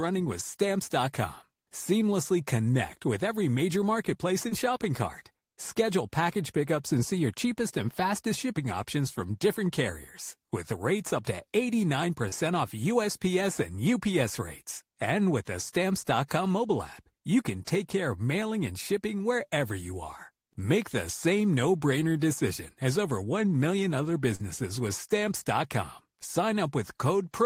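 At 4.49, 12.29 and 24.35 s the speech shows short concealed packet loss. About 20, 20 and 40 ms of audio reached the decoder too late. Each gap was filled by extending the preceding sound and blending back, leaving brief smears or wobbles.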